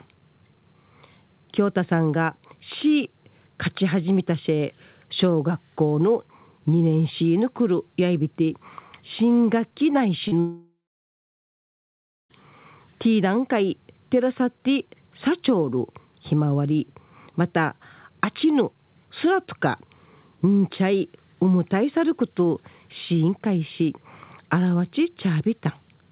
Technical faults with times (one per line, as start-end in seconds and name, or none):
10.28-10.34 short concealed packet loss
10.39-12.31 long network dropout